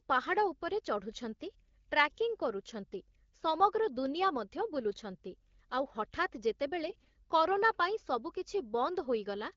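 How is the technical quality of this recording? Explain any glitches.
The recording is AMR-WB HD Voice speech with light coding roughness, marred by one brief corruption burst. AMR bit errors hit from 6.86 to 7.16 s, a span that fits about 15 frames. Flipped low-priority bits at a rate of several percent misplaced excitation pulses and skewed gain and spectrum values. The speech turns hoarse and gargly but keeps its pitch and level, unlike packet loss, which leaves gaps or smeared repeats.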